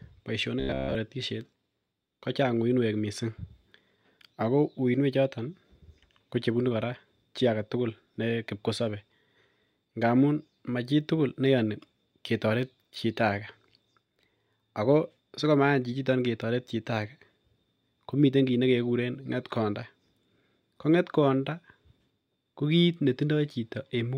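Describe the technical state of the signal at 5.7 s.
At 5.7 s the speech signal is intact, with no audible fault at that moment.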